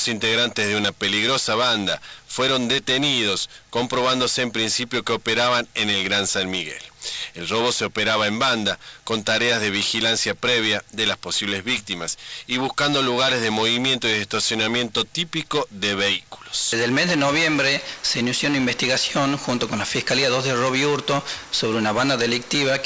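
No technical faults can be heard anywhere in this recording.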